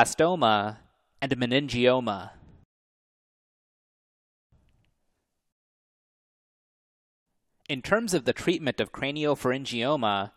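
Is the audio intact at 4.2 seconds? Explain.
No. At 4.2 seconds the clip is inside a rebuffering stall that runs from 2.64 to 4.52 s. The player used up all the speech it had downloaded and had to halt playback until more data arrived. What you hear is an abrupt drop into silence for about 1.89 s, after which the speech picks up exactly where it broke off. No content is missing, but that gap adds dead time to the playback.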